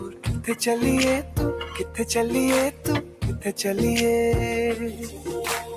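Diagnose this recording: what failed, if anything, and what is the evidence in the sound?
Noise suppressor applied to music or sounds, throughout: a speech-tuned suppressor in call processing treats the steady material as noise, so the level swings by around 10 dB.

Sound cut by the noise suppressor at 0.0–0.27, 1.66–2.02, 2.71–2.86, 3.02–3.23 and 4.91–5.27 s: held portions sink by about 6 to 10 dB.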